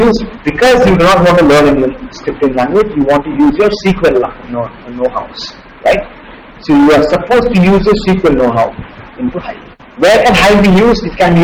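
Hard clipping runs through the whole recording: the signal is driven about 19 dB past what the stage can pass, so roughly a fifth of all samples are cut flat. Those squared-off peaks generate high harmonics, heard as a harsh, continuous fuzz on every loud passage.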